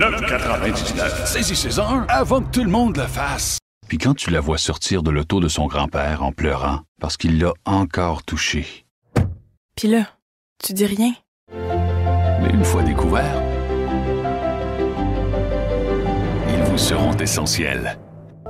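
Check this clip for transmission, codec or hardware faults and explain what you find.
Nothing here points to a fault in transmission, encoding or the playback hardware, so there's nothing to flag on this one.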